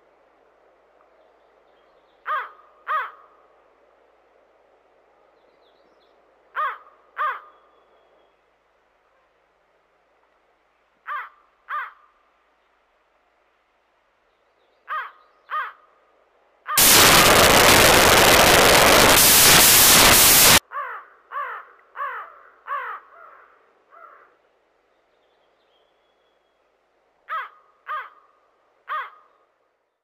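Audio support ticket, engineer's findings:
Loud, harsh broadband noise from 16.78 to 20.58 s, about 3.8 s of it. Samples built from the wrong bytes: decoder or file reader off by a byte or swapping byte order, so the jittery low bits end up as the big part of each sample.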